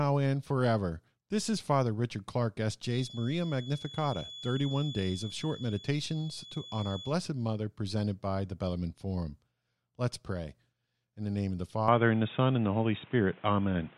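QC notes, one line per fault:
2.80 to 7.19 s, feedback whistle: a thin, steady tone at 3.4 kHz sits behind the speech, roughly 15 dB under it, swelling and fading slowly in level. The likely cause is a speaker-to-mic loop hovering right at the edge of feedback: enough gain to keep that one frequency ringing, not quite enough to let it run away and howl. It stops at 7.19 s.
11.88 s to the end, input switched to a poorer device: the speech suddenly goes dull and boxy, with nothing left above 3.8 kHz, and there's no gap at the changeover. The level also shifts by around 5 dB, and a new noise floor comes in about 30 dB down. That points to the system likely hopping to a different mic or a headset call profile, which has a narrower band and its own tone and hiss.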